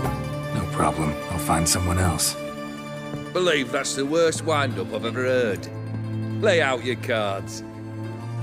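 No technical faults can be heard anywhere in this clip.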